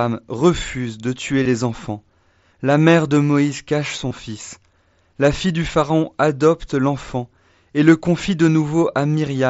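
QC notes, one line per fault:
1.43–1.45 s, concealed Bluetooth headset packet loss: a brief buzzy, held tone after "refusent de tuer", warbling back into "les enfants". The gap suggests about three lost headset packets, filled by repeating recent waveform.
4.09–4.11 s, concealed Bluetooth headset packet loss: a similar short buzzy patch just after "cache son". Roughly three packets went missing, and the receiver papered over the gap by looping the latest stretch of audio.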